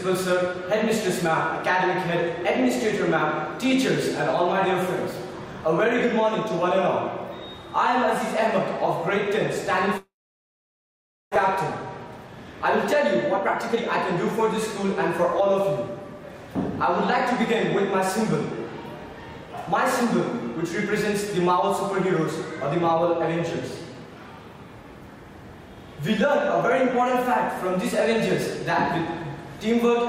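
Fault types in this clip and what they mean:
Long network dropout: From 9.97 s to 11.38 s the sound stops arriving, most likely because of a lost network connection. The last sound trails off as a fading buzz or hiss, then about 1.2 s of near silence follows. About one second of audio never returns.
Jitter buffer speed-up: From 12.18 s to 16.38 s the audio runs about 6% fast at unchanged pitch. Tiny pitch-period slices are repeatedly cut out, roughly a third of a second in total, to shed the extra delay built up around the gap.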